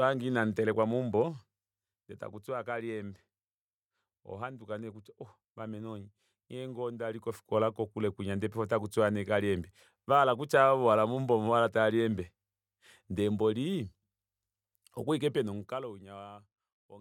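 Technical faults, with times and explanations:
No technical faults can be heard in this speech. Any changes in level are gradual, as a fader would make them.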